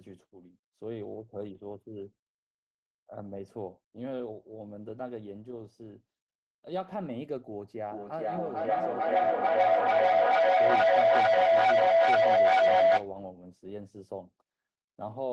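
Feedback howl from 7.89 to 13.13 s interrupts this speech recording: a microphone-loudspeaker loop gains on each pass, building a tone near 700 Hz that pulses about every 400 ms and peaks about 14 dB above the speech.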